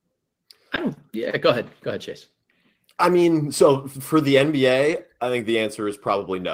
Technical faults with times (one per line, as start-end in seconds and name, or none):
0.75-0.79 short concealed packet loss
0.77-0.79 lost packet rebuilt from error correction
4.91-4.97 lost packet rebuilt from error correction